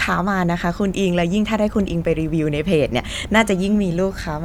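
Nothing in the recording stood out as a technical problem on listening.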